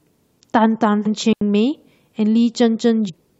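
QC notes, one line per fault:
1.05–1.08 s, damaged data in a compressed stream: a brief glitch. Corrupted frames make the decoder lose sync and skip ahead to the next frame header.
1.33–1.41 s, digital wireless dropout: the sound cuts to near silence for about 84 ms. The receiver mutes after losing too much data, with no noise burst.
3.08–3.10 s, damaged data in a compressed stream: another short glitch. The decoder misreads bad frames and loses sync.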